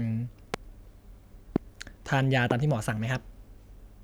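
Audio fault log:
0.54–0.56 s, 1.56–1.58 s, 2.51–2.53 s: loud pop, three single sharp pulses roughly 20 dB above the speech, likely voltage spikes from a switch, plug or driver glitch.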